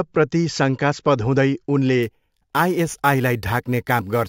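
It's a speech clip, and from about 2.03 s, right after "हुँदै उनले", to the end there's imaging from sample-and-hold upsampling. Each sample got repeated with no smoothing filter, so mirror copies of the spectrum sit above the original band. The first one fills 8 to 16 kHz, about 20 dB under the speech, which fits a 16 kHz source pushed up to 44.1 kHz. You hear it as a bright metallic fizz tracking the level, its lowest copy moving against the pitch.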